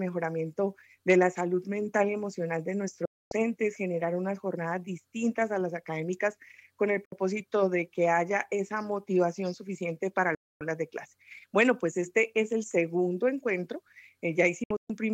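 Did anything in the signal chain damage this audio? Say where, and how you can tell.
Yes. The sound snaps to silence in 3 ms fades at 3.05–3.32 s, 7.05–7.12 s and 10.35–10.61 s, then breaks into short holes across 14.64–14.90 s. This is a digital broadcast dropout at reception: the receiver muted whenever frames failed, and that audio is lost.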